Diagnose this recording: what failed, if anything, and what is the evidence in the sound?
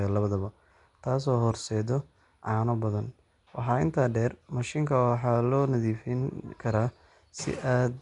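Throughout, the speech sounds gritty and smeared, with hiss and nothing above 10.6 kHz: a codec fault, likely Nellymoser compression filling starved bands with noise.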